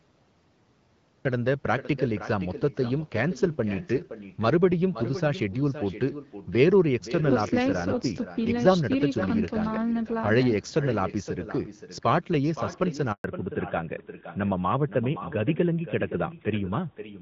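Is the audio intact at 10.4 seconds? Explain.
No. At 10.4 seconds the speech is shadowed by echo with no canceller, a fault that runs through the whole clip. The far end appears to play the call over a loudspeaker, and its microphone returns that sound uncancelled after the network round trip. What comes back is a quieter copy, about 12 dB below the speech, trailing by roughly half a second. It sounds thinner than the direct speech.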